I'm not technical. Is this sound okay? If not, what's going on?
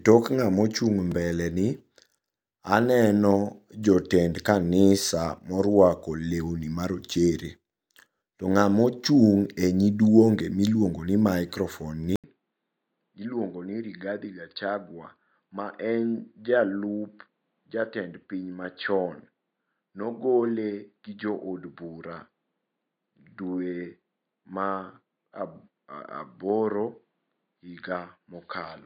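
No. At 1.12 s there is a block of digital silence: the sound drops out for about 3 ms, heard as a tiny click.

At 12.16 s the voice cuts out for 80 ms, then returns duller and quieter until the end. This is likely an input switched to a poorer device, one that passes nothing above 4.7 kHz.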